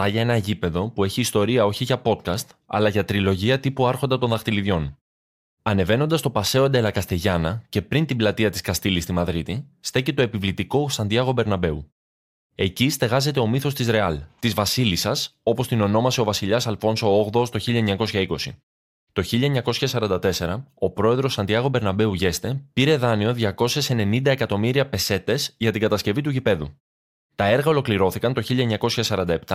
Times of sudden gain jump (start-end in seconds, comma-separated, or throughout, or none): none